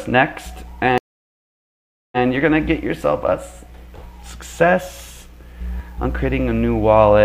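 A stream reconnect runs from 0.98 to 2.21 s: the connection dropped, playback fell silent for about 1.14 s, and a fresh decoder picked up mid-stream. The audio resumes 93 ms earlier than where it stopped, so a short stretch repeats.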